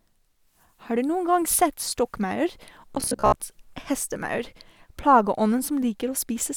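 Robotic sound from repeated short buffers runs from 2.95 to 3.37 s: the speech collapses into a rigid, metallic buzz near 66.8 Hz that only loosely tracks the words. Most likely, new audio arrived too slowly, so roughly half the sound there is a looped fragment, consistent with a 15 ms buffer.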